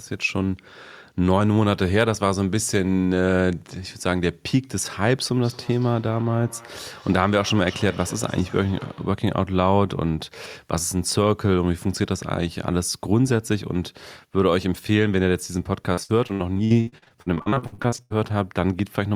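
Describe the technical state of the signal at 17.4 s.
At 17.4 s the speech is inside a burst of repeated packet loss, from 15.93 to 18.12 s. Twenty-five short dropouts, up to 80 ms each, are patched by extending the previous sound. Choppy speech with pieces missing results.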